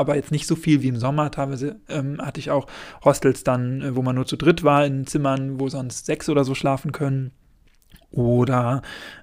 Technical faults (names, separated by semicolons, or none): electrical switching spike